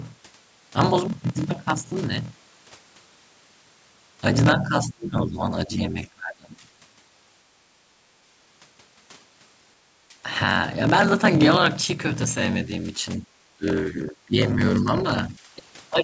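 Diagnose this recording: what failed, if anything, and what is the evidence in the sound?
At the driver or buffer stage, a block size mismatch (padded) is present throughout. A steady 41.7 Hz buzz and playback at 0.889 speed with unchanged timbre fit 1024-sample blocks being zero-padded into larger reads.

In call processing, the speech dips during 4.59–6.66 s, 13.16–14.36 s, 14.80–14.88 s and 15.29–15.35 s, losing up to roughly 25 dB. This is likely speech suppressed in double talk by the echo canceller.

Also in call processing, the background is gated by the echo canceller at 7.58–7.97 s (about 12 dB down) and 10.01–10.12 s (about 9 dB down). The room sound drops briefly, then recovers.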